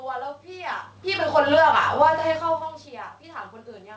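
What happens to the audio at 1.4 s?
The speech, and the room noise behind it, sink together over about half a second, from 1.21 to 1.77 s, ending roughly 10 dB quieter. That is the automatic gain falling: the automatic gain control judged the input too loud, or its background noise too strong, and pulled its gain down gradually rather than all at once. Because the gain applies to the whole signal, the background drops in step with the speech, which distinguishes it from a talker moving away from the microphone.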